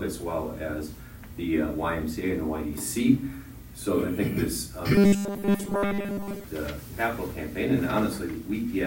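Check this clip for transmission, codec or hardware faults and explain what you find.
One fault stands out: robotic sound from repeated short buffers, from 4.95 to 6.44 s. The whole stretch becomes a rigid metallic buzz at 200 Hz, likely from audio arriving too seldom so a 5 ms slice is looped while real audio is skipped. Unlike steady hum, the buzz starts and stops with the sound's contour.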